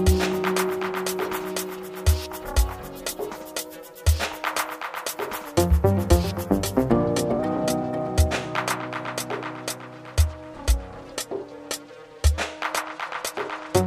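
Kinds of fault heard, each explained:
Drift correction step: the sound twice slows by 5.8% and drops 104 cents, then snaps back, likely from clock-matching software abruptly changing the playback rate.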